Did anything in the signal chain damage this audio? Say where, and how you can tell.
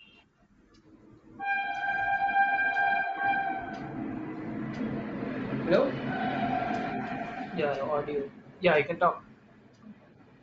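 Yes, at the codec stage, and throughout the speech rather than at any single moment. The upper spectrum has a breathy, grainy sheen, with the top band thinned out and filled with noise, which points to likely Bluetooth LC3 compression at a low rate, consistent with about 32 kbps and 7.5 ms frames. A plain resampling low-pass would leave the top cleanly empty; here it is replaced with hiss-like grain.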